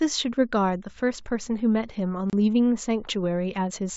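At 2.30 s the speech drops into a hard-edged 30 ms silence, packet loss on an ADPCM call, a few packets' worth. The waveform shows a flat gap. The decoder's predictor and step size then lag the sender's, so speech resumes with brief, slight distortion.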